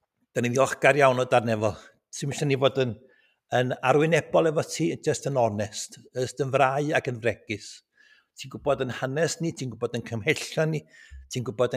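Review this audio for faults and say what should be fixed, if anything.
The noise suppressor misjudged part of the sound as noise twice and pulled it down harder than everything around it. From 3.09 to 3.3 s the level sinks by about 10 dB, and from 7.96 to 8.2 s by about 13 dB, with roughly 150 ms and 200 ms of loss respectively. Sustained and decaying portions dip or die away early, while sharp onsets survive. To prevent this, relax the suppressor's aggressiveness or raise its floor so tonal, steady content isn't classified as noise.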